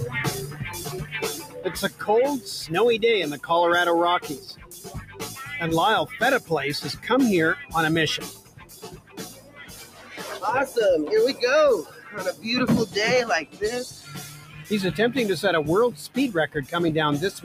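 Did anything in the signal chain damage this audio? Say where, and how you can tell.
Yes. The damage is in the call-processing stage: a noise suppressor applied to music or sounds stays active through the whole clip. It treats sustained tones and decaying tails as background noise and pulls them down, with gain swinging by roughly 15 dB. Transients pass while held material sinks, so the level pumps. On a waveform the envelope dips between onsets. On a spectrogram, sustained partials fade early while onset columns stay bright.

Eight spots show the clearest cases of sound cut by the noise suppressor: 0.77–1.16 s (about 9 dB down), 1.39–1.59 s (about 10 dB), 1.88–2.04 s (about 12 dB), 4.35–5.22 s (about 13 dB), 8.25–10.17 s (about 13 dB, the longest at around two seconds), 11.84–12.14 s (about 7 dB), 13.45–13.61 s (about 12 dB) and 13.9–14.71 s (about 8 dB). In each, the waveform shows a dip in level and the spectrogram shows the affected sound darkened.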